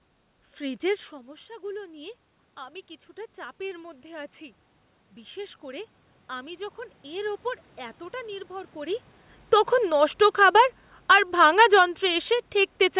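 A speech recording over a narrowband call path with nothing above 4 kHz, consistent with G.711 mu-law. It shows automatic gain rising twice. From 0.6 to 4.38 s the level climbs about 6 dB after the input falls by about 15 dB. From 5.15 to 9.03 s it climbs about 5 dB more. Unlike the talker moving around 1 s and 9 s, these slow swells lift the room noise along with the voice, which points to the gain control rather than distance.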